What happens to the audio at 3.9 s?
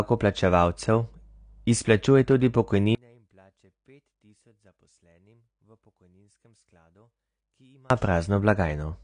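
At 3.9 s you're inside a stretch from about 2.95 to 7.90 s where the whole signal collapses to a residue around 35 dB below its normal level, background and all. That's most likely one channel inverted: one side of the original stereo had its polarity flipped, so when the two were folded to mono the shared content cancelled, and only the small difference between the channels is left.

Layered over that, and running through the entire clip, is plainly audible codec damage, likely from AAC compression. Nothing comes through above 9.7 kHz, which takes the air off the top end, and the coarse quantisation leaves smearing and a warbly texture. The depth of the damage fits an AAC-LC encode at around 32 kbps, so what survives of the cancelled section at 3.9 s carries the same dull, smeared quality.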